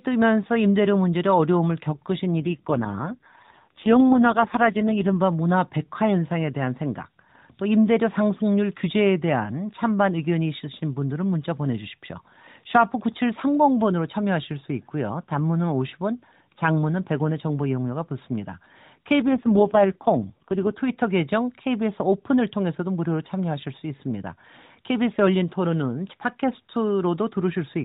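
AMR rate drops at 2.41 to 5.18 s and 19.22 to 20.81 s roughen this narrowband mobile speech clip: the voice turns buzzier and more synthetic without losing band or gaps, consistent with the AMR-NB codec falling from its 12.2 kbps mode to 4.75 kbps over a weakened link.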